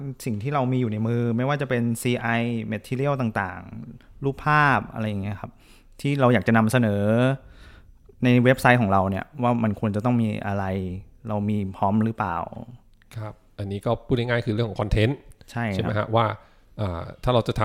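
A speech recording, and nothing is technically wrong with it.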